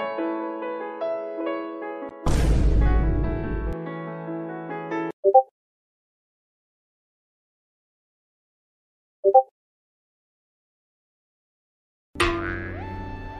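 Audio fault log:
No fault can be heard anywhere in the clip. The sound runs without any break, dropout or disturbance.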